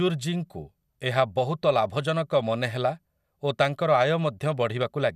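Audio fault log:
No faults detected.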